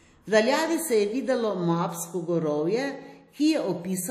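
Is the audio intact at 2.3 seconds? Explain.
No. At 2.3 seconds the speech has the washy, ringing smear of WMA compression, which runs through the whole clip. Nothing sounds above 16.1 kHz. The damage is plainly audible, fitting a bitrate near 48 kbps. Coarse quantisation in long transform blocks is likely spreading the noise.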